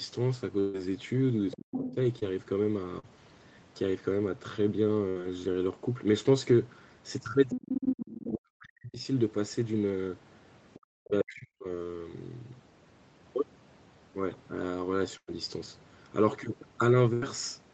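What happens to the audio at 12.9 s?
Nothing goes wrong at 12.9 s; the speech carries on intact through that moment, with only the ordinary band limit of the call path, which leaves nothing above about 8 kHz.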